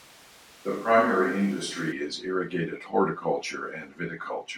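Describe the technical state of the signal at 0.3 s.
At 0.3 s the recording is most likely relying on a distant microphone, the close microphone's feed having dropped out, in a switch to a distant microphone that is already under way when the clip begins and lasts until 1.91 s, returning just before "is irrigated". The speech sounds roomy and hollow, thinner in the bass, with no obvious drop in level but room noise sitting roughly 30 dB below it, until the close, fuller sound cuts back in abruptly.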